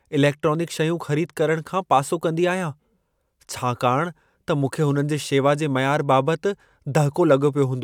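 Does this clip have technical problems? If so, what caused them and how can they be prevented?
No, nothing technical stands out in this speech clip, so there's nothing here that needs fixing or preventing.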